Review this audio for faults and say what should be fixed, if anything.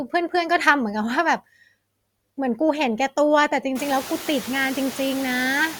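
Noise suppressor artifacts run through the whole clip. Frame by frame, the suppressor cuts the bands it judges to be steady noise by about 20 dB. So the noise sinks in the pauses and comes back up under the speech. This is easiest to hear after the room noise rises, around 4 s, to about 16 dB below the speech. To prevent it, use a gentler suppression depth or reduce the noise in the room before recording.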